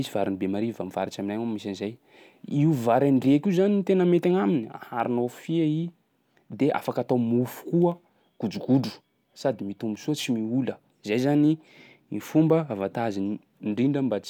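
Nothing in this speech recording stands out as a technical fault, so there's nothing to flag here.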